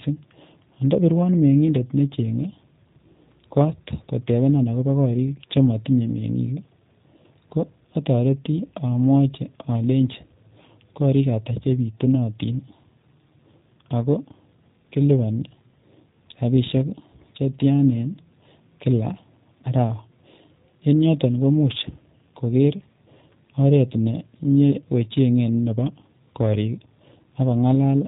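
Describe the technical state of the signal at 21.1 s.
At 21.1 s the G.729 codec damage is plainly audible, as it is across the whole clip. The speech is rebuilt from a vocal tract model, a pitch predictor and a sparse set of pulses, which fits an 8 kbit/s stream. Nothing above 3.8 kHz survives, and the voice sounds rough and synthetic.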